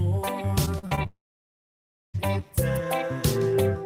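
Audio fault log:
0.65–1.07 s, repeated packet loss (robotic sound): five short holes open in the audio over this span, the longest lasting 42 ms. Each is bridged by extending the preceding sound, and about 132 ms of patched material ends up covering roughly a third of the span. Because these synthetic fills follow one another so closely, the passage turns choppy, with small pieces of the real signal missing between the repairs.
1.07–2.16 s, long network dropout: the sound briefly carries on as a fading continuation of what came just before, then gives way to about 0.98 s of silence. Around 1.08 s of the original audio is absent, and when sound resumes at 2.16 s it picks up after the gap with nothing restored. The most likely cause is a sustained interruption in network delivery, where the receiver extrapolated for a moment and then had nothing left to play.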